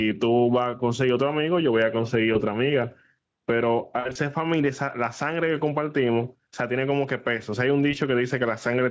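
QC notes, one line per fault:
Throughout: gain pumping. There is a gain swing in the region of 15 dB, so loud and quiet passages sit closer together than they should and the speech sounds squashed. The likely cause is input gain set far too high for the microphone, with a fast limiter or compressor clamping down on every peak and releasing between them.
2.33 to 2.38 s, about 4.0 to 4.17 s, 7.91 to 7.95 s: VoIP packet loss concealed by the speech codec. At 2.33 and 7.91 s a single short gap of roughly 20 ms is filled in. Around 4.0 s the loss is heavier, scattered over about 160 ms with the longest unbroken run near 60 ms. During each gap the decoder keeps repeating its last pitch and spectral shape at falling gain, which gives a brief buzzy tone or coloured noise that fades, in place of real speech. Because each decoded frame depends on the one before, the sound stays weak or distorted for tens of milliseconds or more after packets resume. 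The band stops at 8 kHz, consistent with the call's normal microphone processing and wideband Speex.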